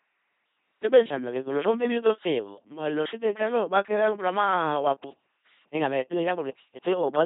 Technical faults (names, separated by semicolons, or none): LPC-10 vocoder